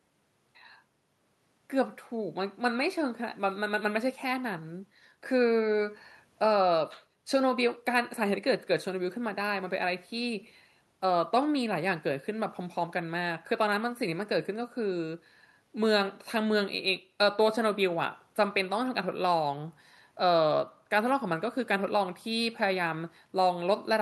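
Nothing stood out on listening to this speech recording; the faint room noise, about 44 dB below the speech, belongs to the recording space itself.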